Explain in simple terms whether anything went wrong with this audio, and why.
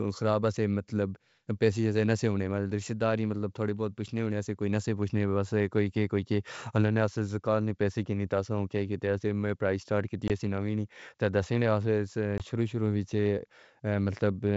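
Packet loss on an ADPCM call hit the speech twice. Each time about one packet's worth of sound, roughly 20 ms, went missing. The receiving end then briefly lost track of the sender's running predictions. The first gap is at 10.28 to 10.31 s, right after "نے پرائیس سٹارٹ کی". The second is at 12.38 to 12.43 s, just before "شروع شروعات". Each leaves a sharp little hole, and the speech comes back slightly distorted until it settles.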